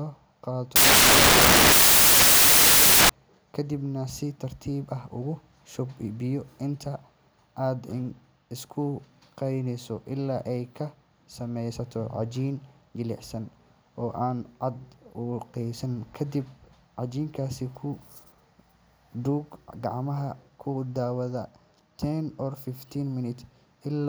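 Samples built from the wrong bytes, from 0.76 to 3.09 s: the reader misassembles each sample's bytes, so the rapidly changing low-order bits land in the high-order position. The speech is buried under loud, harsh broadband noise, close to white on the louder sounds.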